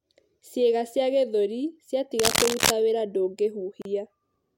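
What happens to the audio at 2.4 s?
A burst of cable scratch noise runs from 2.19 to 2.71 s. It sounds like dense, uneven scratching, about as loud as the speech. The likely cause is a worn cable or connector being moved, making its contact resistance jump rapidly.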